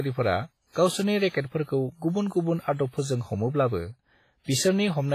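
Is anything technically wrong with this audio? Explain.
Yes, there's clear compression damage running through the whole speech clip, and it's likely WMA compression. The transform coder smears its quantisation noise across long blocks, so you hear a ringing, washy haze around the speech, with hiss that swells and fades along with it. Weak detail has been thrown away, and nothing survives above about 15.4 kHz. How heavy the damage is fits a low bitrate of around 24 kbps.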